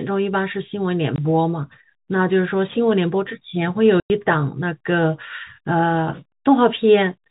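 At 1.16 to 1.18 s and again at 4.0 to 4.1 s, the speech drops into dead silence with hard edges. This is packet loss filled with silence: the gaps fit one 20 ms packet, then five, replaced by nothing.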